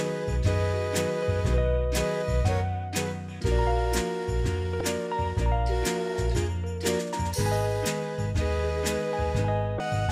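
Damaged data in a compressed stream occurs twice, at 4.78 to 4.81 s and again at 9.77 to 9.80 s. In each spot part of the encoded data is corrupted, so the decoder misreads or rejects those frames, loses sync and hunts for the next valid frame header before decoding resumes. The result is a short fault of about 30 ms at each time, heard as a chirp, squawk, click or short hole in the sound.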